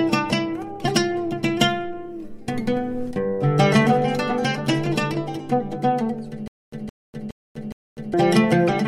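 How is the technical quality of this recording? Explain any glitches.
There's one real glitch, a stutter with silent gaps from about 6.48 to 8.14 s. A short burst of roughly 167 ms keeps coming back, four times in all, each followed by about 248 ms of dead digital silence, so it pulses at a steady beat of around 415 ms. That pattern is likely a stalled player or stream grabbing its last fragment on every retry and then running dry, which means whatever should have sounded in those gaps is simply gone.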